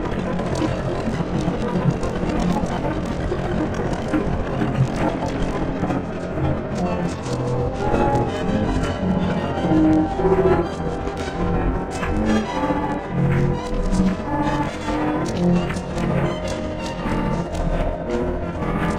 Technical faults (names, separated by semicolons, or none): clock drift buffer slips